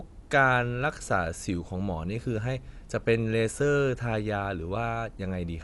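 Throughout, the speech sounds dull and plainly damaged, with nothing above 11.5 kHz. This is likely Dolby Digital compression narrowing the band, which fits a bitrate around 64 kbps.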